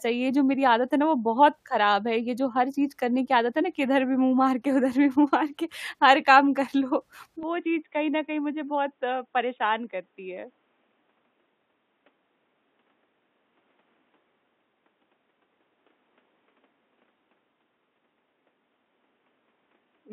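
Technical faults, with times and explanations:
7.43 s to the end, input switched to a poorer device: the speech abruptly dulls and narrows, with nothing above 3.8 kHz, drops somewhat in level, and gains a faint new noise floor with no gap. This most likely comes from recording switching to a lower-quality, band-limited microphone.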